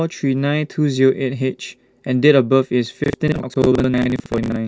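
From 3.04 s to 4.56 s the speech is overrun by processor overload crackle. The processor falls behind and misses buffer deadlines over and over. At each miss, a short slice of old audio is replayed with hard edges, which gives a gritty, stuttering tear across the voice. The spacing suggests buffers of around 20 ms. On a spectrogram this shows as a dense comb of thin vertical broadband lines. The waveform shows abrupt step discontinuities and repeated chunks.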